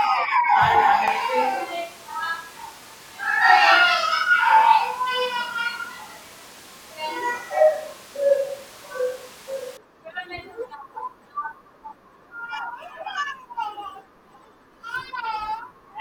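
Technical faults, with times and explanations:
1.08–9.77 s, switch to a distant microphone: the speech abruptly turns roomy and hollow, losing low-end body, and returns just as abruptly to the close, full sound at 9.77 s. The level stays about the same, but room noise rises to roughly 25 dB below the speech. This is likely a failed or omitted close microphone, with a more distant pickup that captures more reflections and ambience covering the gap.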